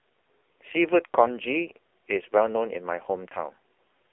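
AMR narrowband mobile codec damage runs through the whole of this roughly 4-second speech clip. The sound is confined to a telephone band of about 300 Hz to 3.5 kHz, with nothing above 3.7 kHz. The coding damage is heavy: a buzzy, synthetic quality where a vocal-tract model driven by sparse pulses stands in for the real waveform. That degree of damage fits one of AMR-NB's lowest modes, around 5.9 kbps.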